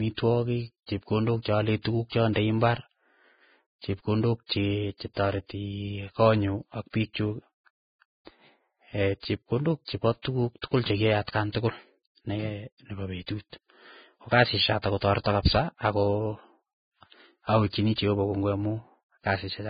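Speech throughout with heavy Vorbis compression: nothing above about 4.9 kHz, grainy hissing treble and smeared attacks, likely from a very low bitrate near 13 kbps, unlike MP3's metallic swirl.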